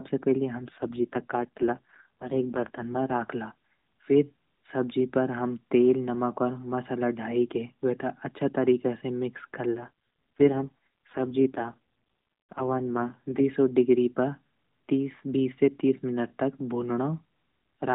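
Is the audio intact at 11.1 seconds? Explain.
No. An AMR rate drop from 9.74 to 13.43 s cuts the codec's bit budget, consistent with 12.2 falling to 4.75 kbps, so speech turns buzzier and more synthetic, with no gap.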